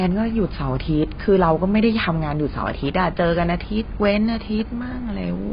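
Heavy AAC compression is the likely cause, at a data rate that points to around 16 kbps. The encoder has lowered the cut-off and starved the remaining bands, so the speech sounds dull and smeared throughout, with warbling, fizzy sibilants.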